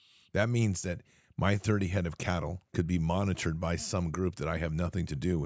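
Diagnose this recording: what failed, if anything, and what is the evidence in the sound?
Nothing in the recording points to a failure at any stage, from the analogue wiring through to playback: the speech signal is continuous and intact, with no audible defect.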